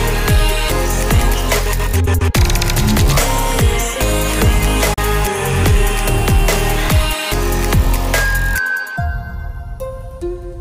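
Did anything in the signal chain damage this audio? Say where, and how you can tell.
Yes. A digital broadcast dropout at the reception stage mutes the sound from 4.93 to 4.98 s after an 8 ms fade, consistent with one failed frame of about 32 ms. The waveform shows a brief flat gap, and the spectrogram shows a clean full-band vertical blank.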